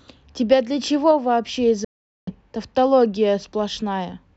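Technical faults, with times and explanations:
1.85–2.33 s, Bluetooth dropout: the speech cuts abruptly to silence for about half a second, then picks up further along rather than where it stopped. This is likely wireless packets arriving too late at the headphones and being discarded, losing roughly 0.43 s of audio.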